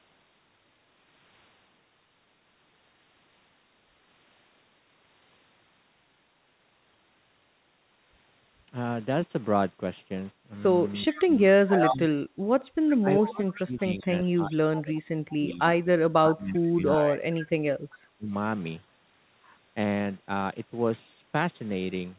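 Speech suppressed in double talk, from 11.07 to 12.05 s and again from 13.0 to 18.33 s: the level dips by about 25 dB in the first stretch and up to about 30 dB in the second, with roughly three seconds chopped away in pieces. This is likely an echo canceller mistaking simultaneous talk for its own loudspeaker echo and turning everything down.

Echo leak, at 11.12–11.95 s and 12.89–13.58 s, then brief scraps at 15.3, 16.57 and 17.9 s: a delayed copy of the speech trails 391 ms behind. It sits about 20 dB below the main signal at first and fades to about 30 dB below. This is likely a loudspeaker echo that the far end's canceller only partly removed.

Throughout, the call path's narrow band leaves nothing above 4 kHz, which fits G.711 coding.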